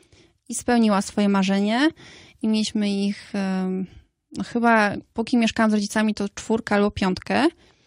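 Nothing here trips a technical fault, with no dropouts, glitches or distortion turning up anywhere in the recording.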